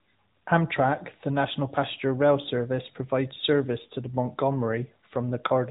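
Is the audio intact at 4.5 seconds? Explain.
Yes, the speech at 4.5 seconds is intact, with no fault at that moment.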